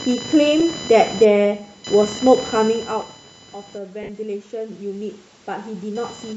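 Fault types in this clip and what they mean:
Computer activity noise: Load changes in the computer are shaking the shared audio ground, so a buzzy, chirping whine rides under the speech the whole way, pulsing at about 1 kHz and sitting fairly high, not far below the voice itself.
Bluetooth LC3 compression: The speech has a breathy, grainy edge on its upper range where a transform codec has thrown away detail and filled it with noise. That's likely LC3 from a Bluetooth LE Audio link, and the damage fits a rate around 48 kbps.
Lost LE Audio frames: Short dropouts where the decoder patched missing frames by repeating the last spectrum, giving a brief noisy smear: 10 ms at 0.6 s, 20 ms at 2.17 s, and a longer 60 ms patch at 4.03 s.
Automatic gain rising: From 3.92 s to 6.09 s the gain control decides the input has gone quiet and slowly turns itself up by about 6 dB, so speech and background noise swell together over those two seconds.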